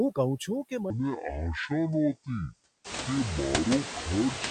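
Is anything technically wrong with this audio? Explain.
Yes, there are two faults. Throughout the clip, noise suppressor artifacts are present. The suppressor pulls down bands it judges to be steady noise by about 11 dB, frame by frame, so the background dips between phrases and swells under the speech.

From 0.9 s to the end, a section at the wrong speed plays at 0.56 times its recorded rate, likely because that stretch was clocked to the wrong rate during editing or playback. Speed and pitch drop together, roughly ten semitones, so the speech turns deep and dragging. Around 3 s the room noise rises by about 18 dB, sitting about 9 dB below the speech.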